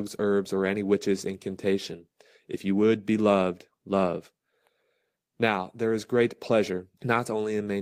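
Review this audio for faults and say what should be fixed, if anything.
No faults can be heard anywhere in the recording. Nothing needs to be fixed.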